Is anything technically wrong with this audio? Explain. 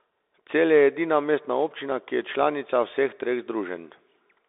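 Yes. The whole thing runs through a Bluetooth CVSD headset codec. The band sits at roughly 300 Hz to 3.7 kHz with nothing above 3.8 kHz, which fits a 64 kbps CVSD link. Its one-bit up-or-down steps can't keep up with sharp, bright sounds, so s sounds go scratchy and a grainy hiss sits under the speech.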